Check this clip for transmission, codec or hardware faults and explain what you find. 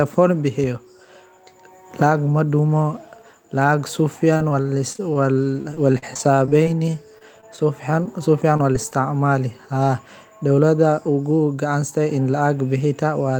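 One transmission fault stands out: repeated packet loss (robotic sound) between 4.33 and 8.94 s. Over that stretch, 26 short gaps, none longer than 36 ms, are patched by stretching the preceding sound, adding about 463 ms of filler while 360 ms goes missing, roughly a tenth of the span. The speech turns choppy, with pieces missing. A spectrogram shows repeated smeared, flat harmonic bands; the waveform shows brief repeated or decaying segments.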